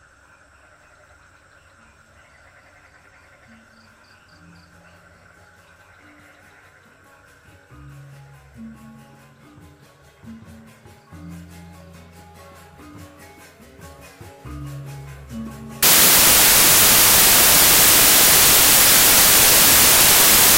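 From 15.83 s to the end, the samples are built from the wrong bytes. The byte order or alignment is off, so low bits dominate. It sounds like loud, harsh broadband noise.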